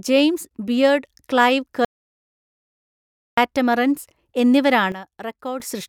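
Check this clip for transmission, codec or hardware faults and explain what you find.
Two faults stand out in this speech recording.

From 1.85 s to 3.37 s the speech cuts off mid-flow and the track goes to silence for about 1.5 s, with no room tone or hiss underneath, before the speech returns just as abruptly. That is an audio dropout to silence. The likely cause is a momentary loss of the input signal, such as a disconnected device, a broken link or an accidental mute, while the recorder kept writing silence. Whatever was spoken in that gap is unrecoverable.

At 4.92 s the whole signal, voice and background noise together, drops suddenly by about 10 dB and stays there until 5.6 s, when it snaps back up. Neither edge has any fade. This is a sudden gain jump, likely caused by a digital gain setting or bit shift applied instantly from one sample to the next instead of being ramped, so the level changes in a single step.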